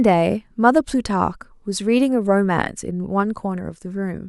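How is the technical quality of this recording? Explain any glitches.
No glitches or technical faults are audible anywhere in the recording.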